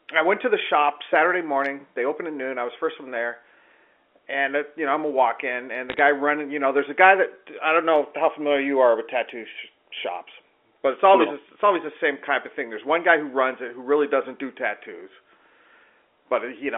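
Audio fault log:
5.90–5.99 s, bit errors on a digital phone line: between "a walk in and" and "running you know there's", a brief burst of sharp ticks over the unchanged speech. Flipped bits corrupt single samples, roughly one bit in three hundred, on an A-law telephone channel band-limited to about 300 Hz–3.4 kHz.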